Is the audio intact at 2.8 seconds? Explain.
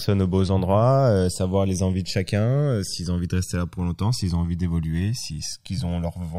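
No. At 2.8 seconds the speech is affected by channels drifting apart, which runs through the whole clip. The two channels were captured on separately clocked devices, with a clock mismatch of around 200 ppm, so the offset between them keeps growing, reaching roughly a millisecond and a half by the end. Folded to mono, the resulting comb-filter notches glide steadily through the spectrum, giving the speech a slow, sweeping flanging colour at that moment.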